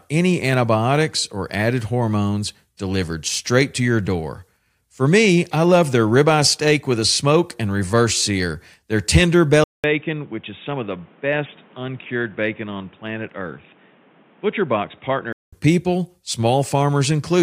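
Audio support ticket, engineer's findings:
Input switched to a poorer device, 9.64–15.53 s, after "reverse sear their tender": 0.2 s gap, then speech band-limited to 3.8 kHz, a few dB quieter, with a new noise floor well below the speech. Likely a mid-capture switch to a headset or secondary mic.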